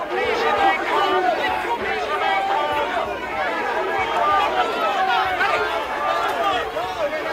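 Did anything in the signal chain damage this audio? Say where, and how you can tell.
No damage from the signal chain can be heard anywhere in this audio.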